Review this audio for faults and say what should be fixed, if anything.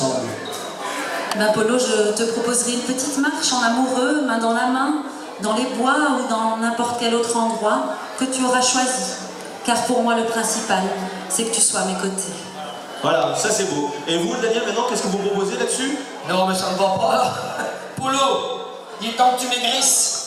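Nothing needs fixing, since the signal is technically sound throughout, with no faults to correct.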